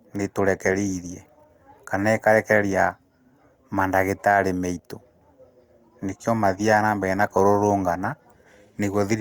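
No technical faults can be heard anywhere in this speech recording.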